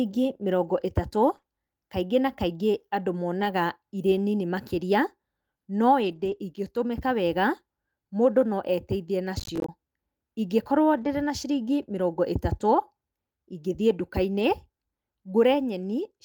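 A brief rough, noisy patch at 1.33 s, just before "kaingĩ na", is a lost packet rebuilt from error correction. About 20 ms of audio never arrived, but the following packet carried a low-bitrate copy that the decoder played instead. There is no gap, only a coarser, grainier stretch. The same thing happens at 3.41 to 3.47 s (40 ms), 6.03 to 6.37 s (a longer 180 ms run), 10.97 to 11.07 s (60 ms) and 14.39 s (20 ms).

Right after the first patch, from 1.37 to 1.45 s, still before "kaingĩ na", the sound smears and wobbles briefly. This is short concealed packet loss in two back-to-back 20 ms holes, with no backup copy available. The receiver extended the preceding sound to fill each one and then blended back into the real signal, which leaves that slurred, slightly unnatural texture.

From 9.40 to 9.69 s a gritty burst of crackle rides on the speech and then stops. This is processor overload crackle. 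The audio processor kept missing its deadlines, and each missed buffer dropped out as a tiny hard-edged silence. The rhythm of the clicks fits buffers of roughly 10 ms, with around fifteen missed over that stretch.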